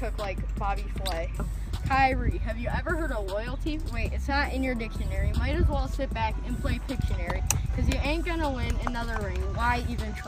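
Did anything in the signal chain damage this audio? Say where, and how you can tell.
Yes. Imaging from linear upsampling runs through the whole clip, introduced at the sample-rate conversion stage. The top of the band sounds dulled, and a faint metallic shimmer rides on the brightest, hissy parts of the sound. Its first mirror image spans roughly 11.03 to 22.05 kHz, around 30 dB below the signal, which points to a rate raised from about 22 kHz to 44.1 kHz by straight-line interpolation. That weak filter both rolls off the top and lets the images through.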